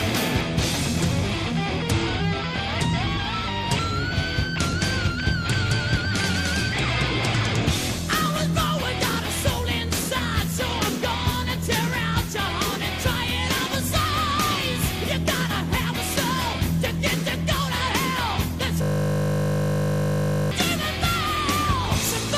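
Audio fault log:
18.82–20.51 s, system hang loop: a 20 ms fragment repeats exactly, producing a steady 50 Hz buzz. The system froze while the hardware replayed its ring buffer.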